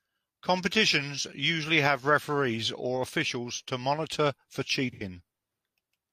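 At 4.92 to 5.03 s, after "officials to monitor for", AAC frame loss with concealment smears the speech into a noisy, phasey patch, fitting two lost frames; unlike a dropout, it never goes silent.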